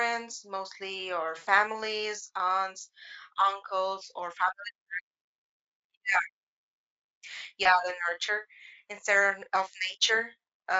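At 1.37 to 1.49 s and 7.63 to 7.67 s, VoIP packet loss concealed by the speech codec stretches the speech into a fading buzz, seen as smeared, decaying harmonics on a spectrogram.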